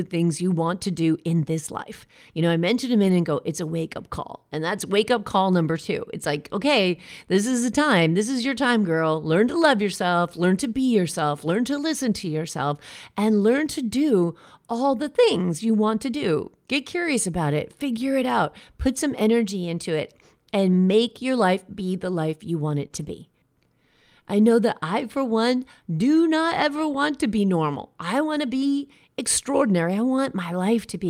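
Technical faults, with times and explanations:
3.07 s and 8.43 s, lost packet rebuilt from error correction: each spot has a brief rough, noisier patch of about 20 ms with no gap. A lost packet was replaced by the low-bitrate copy carried in the next packet, so the decoder played that coarser version.
22.87 to 22.91 s, short concealed packet loss: a brief smear or wobble. About 20 ms never arrived in time, so the receiver extended the preceding sound, following its pitch if voiced or as shaped noise if not, then blended back into real audio.
22.91 to 23.09 s, lost packet rebuilt from error correction: about 100 ms of rough, noisier sound, with no gap, straight after the concealed stretch. The length fits roughly five separate packets rebuilt from the reduced-quality copies carried in the packets that followed.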